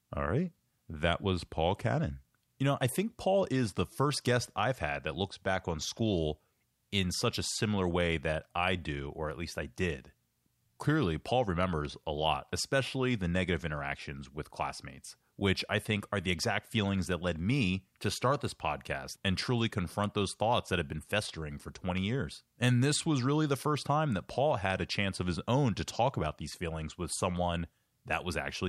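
No technical faults can be heard anywhere in this speech recording. There is no point in the audio that needs a timestamp or a correction.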